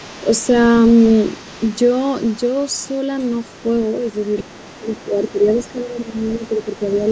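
From the very start to the end at 7.11 s, a faint second voice sits underneath the main talker, roughly 25 dB below the speech, present throughout. This is the other side's voice leaking through. The likely cause is that the talker's device plays the far end on a loudspeaker, the microphone picks it up again, and the echo canceller fails to strip out that residue before sending the signal on.

Later the main talker's speech sags in a run of dips while that far-end voice is active, at 4.42 to 4.86 s, 5.05 to 5.47 s, 5.73 to 6.14 s and 6.38 to 6.61 s. The first dip goes deepest, around 15 dB; the others fall by around 10 dB, and the last is the briefest. This is speech suppressed in double talk, likely because the echo canceller cannot tell its own talker from the loudspeaker echo when both are speaking and turns everything down together.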